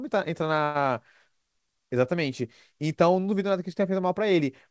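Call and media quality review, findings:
Call audio freeze, 0.64–0.77 s: jitter buffer likely ran dry on delayed packets; last sound stretched into a fading buzz or hiss, then speech resumes intact, 108 ms late.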